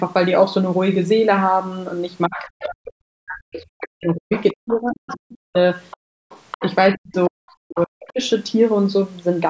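Speech suppressed in double talk, from 2.27 to 5.55 s: the speech sinks by around 40 dB at its deepest and breaks up for roughly three seconds. The likely cause is that the echo canceller, faced with both sides talking at once, could not tell this talker from the loudspeaker echo and pulled everything down.

The other side's voice leaking through appears as a brief scrap at 2.6 to 2.67 s, around 10 dB below the speech, then a longer, quieter stretch from 4.36 to 6.75 s, around 15 dB down. Both likely come from loudspeaker playback that the canceller failed to remove from the microphone.

Background gated by the echo canceller, from 5.97 to 6.3 s: the room sound drops by about 36 dB for roughly a third of a second while the loudspeaker plays, then returns once the canceller releases the microphone.

Speech suppressed in double talk returns from 6.61 to 8.2 s, again dipping around 40 dB and affecting about a second. 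Inside it, from 7.78 to 8.12 s, the other side's voice leaks through faintly, around 20 dB below the speech.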